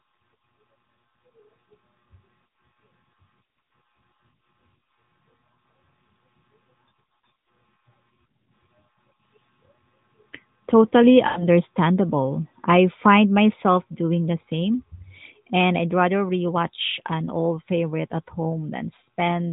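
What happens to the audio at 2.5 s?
A single lost AMR speech frame, from 2.48 to 2.50 s. It failed its checksum, so the decoder repeated the previous pitch and vocal tract settings at falling gain, producing a brief dip or warble.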